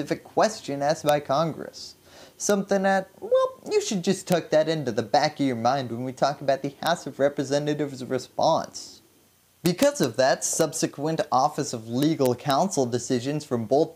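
Sharp, violent cracks cut through the loudest moments of the sound, far harsher than ordinary clipping. Single cracks land at 1.09, 2.50, 4.32, 6.87 and 10.61 s, and longer bursts run from 9.66 to 10.04 s and from 12.03 to 12.51 s. This is integer overflow. Peaks only barely go past full scale, by about 0 dB, but instead of being limited they wrap around to the opposite extreme of the range.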